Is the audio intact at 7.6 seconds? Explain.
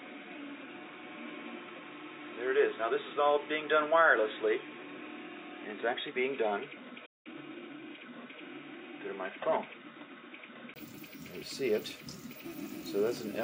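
No. At 7.6 s the sound is dull and boxy, with a faint new noise floor well below the signal. The likely cause is an input switched to a poorer device, from 0.0 to 10.76 s.

A time-compressed catch-up also runs from 7.27 to 8.03 s. After a stall, the player trims its backlog by cutting small pieces and cross-fading the joins. The sound plays about 1.25 times fast at normal pitch.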